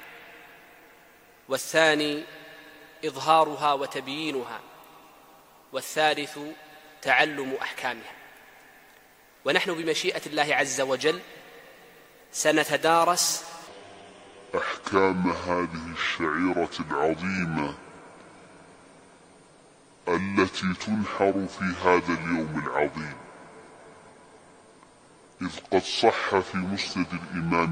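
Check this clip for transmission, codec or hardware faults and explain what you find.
There's one clear fault here: a section at the wrong speed, running from 13.67 s right through to the end at 27.72 s. Everything drops to 0.59 times normal speed, so the sound turns slow and deep, sitting roughly ten semitones lower. That shift most likely comes from the section being played against the wrong clock.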